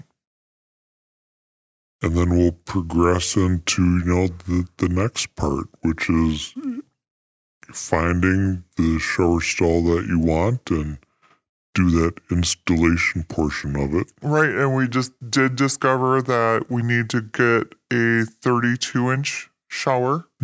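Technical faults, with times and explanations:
Throughout, wrong sample rate: the speech sounds low, slow and dragging. Speed and pitch drop together, to 0.73 of normal speed and 5.6 semitones lower. That fits audio recorded at 22 kHz being played back at 16 kHz without conversion.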